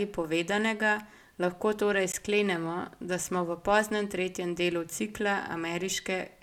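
At 2.12 s and 3.24 s, blocks of digital silence, 15 ms and 5 ms, cut out the speech. With no fade, each short gap is heard as a tick or dip, unlike a smoothed dropout.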